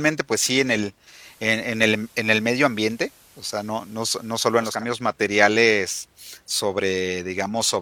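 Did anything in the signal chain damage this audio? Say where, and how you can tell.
Yes, at the radio receiver, before capture: digital radio blending to analogue. At 0.99 s a 318 ms cross-fade brings in FM hiss roughly 30 dB down and shifts level about 1 dB, reversing at 4.87 s. A codec bandwidth drop would not add hiss.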